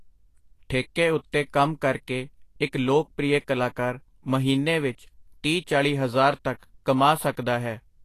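From start to finish the speech sounds hissy and grainy, with a roughened edge on tones, softened consonant attacks, and nothing above 14.2 kHz. That is likely Vorbis compression at low quality, fitting a bitrate around 34 kbps, where coarsely quantised treble detail turns into noise.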